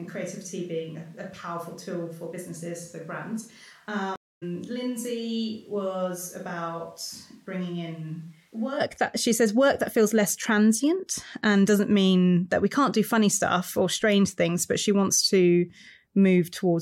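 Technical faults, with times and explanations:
0.00–8.79 s: switch to a distant microphone. Already under way when the clip begins. The speech is roomy, hollow and thin, about 10 dB quieter, with room noise only about 35 dB down. This likely comes from a faraway microphone standing in for the close one. The close sound returns abruptly before "that she says work".
4.16–4.43 s: stream reconnect. The audio drops out for 258 ms, then resumes roughly 300 ms further on. The connection broke, and a fresh decoder restarted mid-stream.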